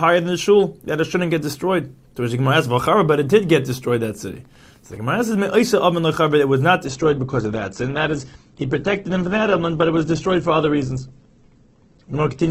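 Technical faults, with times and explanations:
2.38–4.97 s, Wi-Fi interference: a faint, steady ticking about ten times a second sits under the sound for roughly 2.6 s, around 40 dB below it. A nearby Wi-Fi radio sends its beacon every 102.4 ms, and the audio circuit rectifies each burst into a small click, which sets the regular tick rate. On a spectrogram this shows as a row of evenly spaced thin vertical lines across a wide frequency band. The waveform carries tiny, regularly spaced spikes.
6.85–12.50 s, adaptive stream at a lower bitrate: at 6.85 s the quality drops suddenly and stays low to the end. The treble disappears, the sound takes on an artefact-laden character, and there is no gap at the switch. The stream fell back to a leaner version when the connection slowed. The sound fits a step from about 64 kbit/s to about 12 kbit/s Opus. On the spectrogram the content above 8.2 kHz vanishes at the switch, leaving a hard ceiling with patchy, blocky texture below it. 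The waveform runs on without any break.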